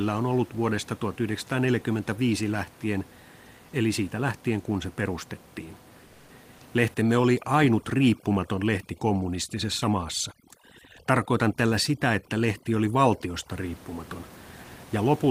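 From 6.07 to 6.25 s, comfort noise replaces the background for about 180 ms. The real room sound, sitting about 30 dB below the loudest speech, becomes a flat, featureless hiss about 2 dB quieter. The likely cause is discontinuous transmission, with the receiver filling the gap.

From 6.94 to 13.52 s, overdone noise removal takes hold. The room noise, about 23 dB below the speech, drops and breaks up into twinkling, warbling specks. Quiet parts of the voice are stripped away too.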